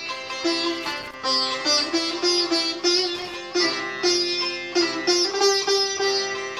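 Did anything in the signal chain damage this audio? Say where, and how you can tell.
Yes, in the analogue wiring: loose connector crackle, where a worn or dirty contact kept making and breaking as it moved. That chopped the signal into irregular bursts of scratchy crackle, from 0.72 to 1.14 s and again from 3.16 to 3.36 s.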